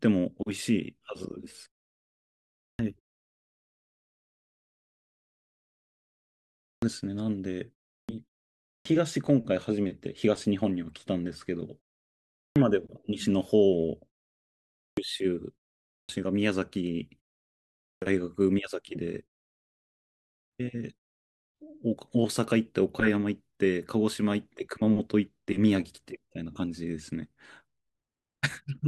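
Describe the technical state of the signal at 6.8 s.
At 6.8 s the signal shows a clipped start after a pause: from 6.72 to 6.82 s, roughly the first 100 ms of speech following a 3.8 s silence never reaches the output, because the playback device has dropped into a low-power state during the gap and is still waking when sound resumes. The word therefore bursts in abruptly, missing its onset. Unlike muted pauses, where only the background vanishes between phrases, here actual speech is lost.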